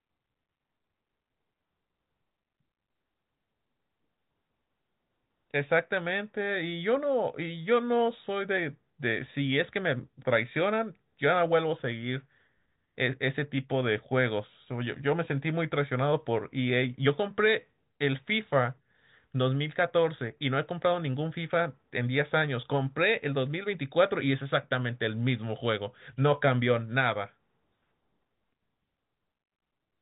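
No faults detected in the speech; the G.711 telephone coding is working as designed, with nothing above 3.8 kHz.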